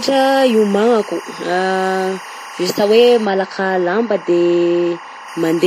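Timecode bleed runs under the whole speech clip: a chirping warble alternating near 1 and 2 kHz, roughly 15 dB down, at 24 frames per second. Its rhythmic switching distinguishes it from a steady hum.

Throughout, smeared, swirly artefacts of two different characters sit together, with nothing above 15.2 kHz. This fits transcoding between lossy codecs, likely a WMA stream at around 48 kbit/s re-encoded to Vorbis near 39 kbit/s.

From 3.25 to 5.28 s, de-emphasis applied wrongly dulls the speech. Treble slopes smoothly down, about 14 dB lower at 10 kHz than at 1 kHz, a gradual tilt rather than a sharp cut-off.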